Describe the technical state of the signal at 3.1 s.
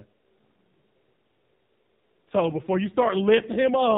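An AMR rate drop covers 3.1 s, running from 2.30 s to the end of the clip. The narrowband mobile codec drops to a lower mode, which fits a switch from 12.2 kbps to about 5.9 kbps, with the freed bits going to error protection on a weak radio link. The band stays capped at 4 kHz and there is no gap, but the voice turns rougher, buzzier and more synthetic than before 2.30 s.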